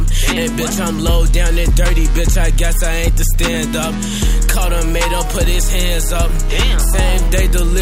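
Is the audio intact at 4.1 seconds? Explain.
Yes, the audio is intact at 4.1 seconds, with no dropout, click, distortion or other fault audible at that point.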